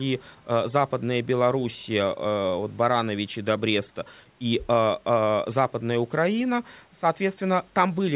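There are no technical faults to describe in time order in this speech, which carries the narrow telephone bandwidth of its call path, with nothing above about 4 kHz.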